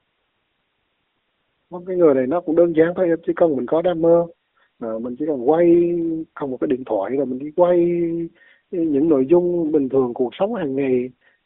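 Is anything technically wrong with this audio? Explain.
No, nothing is technically wrong: the speech has the narrow bandwidth of an ordinary mobile phone line, roughly 250 Hz to 3.5 kHz, which is normal for an AMR narrowband mobile codec call.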